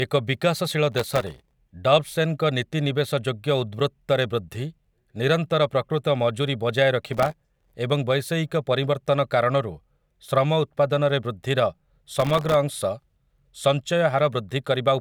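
A processor too busy to finish its very short audio buffers on time (the texture points to buffers under a millisecond) drops dozens in a row, each leaving a hard-edged gap of silence. This processor overload crackle sounds like gritty tearing over the speech from 0.92 to 1.56 s, again from 7.13 to 7.76 s between "ନିରନ୍ତର ପ୍ରକୃତ ମଜୁରୀ ବଜାୟ" and "ଏବଂ ବୈଷୟିକ ପରିବର୍ତ୍ତନ କାରଣରୁ", and briefly from 12.16 to 12.54 s after "କାରଣରୁ ଶ୍ରମ ଉତ୍ପାଦନରେ ବୃଦ୍ଧିର".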